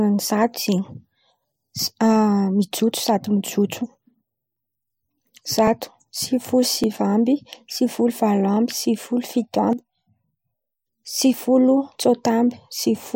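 At 1.79, 3.24, 4.57, 5.68, 6.84 and 11.34 s the speech jumps forward, each time losing roughly 10 to 30 ms. No gap is heard. This is likely a dropped buffer (overrun), where the recorder missed its read before the hardware overwrote the samples.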